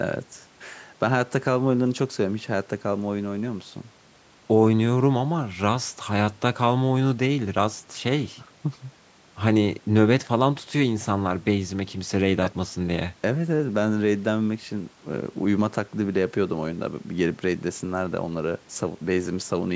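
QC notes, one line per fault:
Nothing stood out on listening to this speech clip, which carries the usual call microphone processing.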